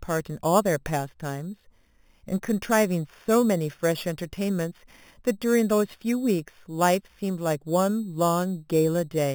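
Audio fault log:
Throughout: imaging from sample-and-hold upsampling. A bright, metallic fizz rides on the speech and rises and falls with it. Each sample appears to have been repeated without a smoothing filter, which fits a step from 8 kHz up to 48 kHz. Mirror copies of the spectrum sit above the original band. The lowest copy fills 4 to 8 kHz, about 18 dB below the speech. Because it is mirrored, it moves opposite to the pitch.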